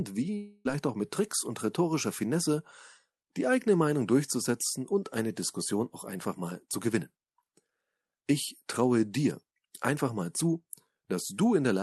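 From 0.37 to 0.67 s, the speech smears into a fading buzz, then resumes with about 0.28 s gone. This is likely a long network dropout.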